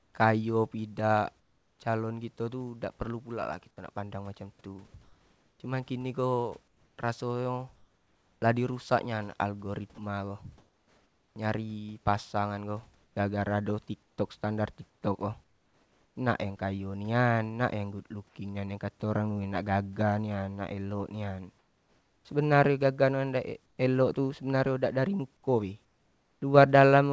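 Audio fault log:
0.00–1.79, 6.68–8.42, 10.58–11.36, 14.03–16.16, 21.59–22.25, 23.66–23.78, 25.85–26.42 s: comfort noise in place of the background. In pauses the room hiss turns flat and featureless, up to about 4 dB quieter. This is likely discontinuous transmission with synthetic fill.
4.88–4.94 s: sound dropped by the voice detector. About 30 ms of speech gives way to steady noise. The detector likely judged the quiet sound to be background and stopped sending.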